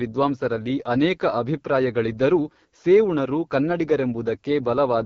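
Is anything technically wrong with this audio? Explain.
Yes. Throughout the speech there is AMR wideband (HD Voice) codec damage, and it is plainly audible. The codec models the voice as pulses through a vocal tract filter up to 6.4 kHz and fills the 6.4 to 7 kHz band with shaped noise. Here the speech sounds rough and raspy, which fits the 8.85 kbit/s mode, one of the two lowest rates. Unlike narrowband telephone coding, some airy top end around 7 kHz remains, but it is synthetic noise rather than real detail.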